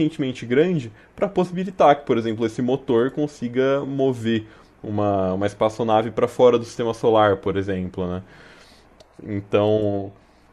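At 7.45 s there are lost LE Audio frames: a 10 ms gap, which fits one missing frame on a likely LC3 link, is concealed by repeating the previous spectrum with scrambled signs. Unlike a plain dropout, it leaves a brief grainy smear rather than silence or a click.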